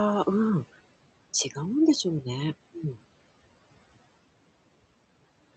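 Speech runs through the whole clip, and noise suppressor artifacts are present from start to end. The suppressor pushes the steady room noise down by about 17 dB, frame by frame. So the background drops away in pauses and swells back under the talking. The room noise itself sits about 20 dB below the speech. The call path cuts the top end near 8 kHz.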